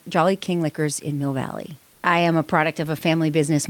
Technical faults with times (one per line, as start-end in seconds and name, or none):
1.93-2.03 comfort noise in place of the background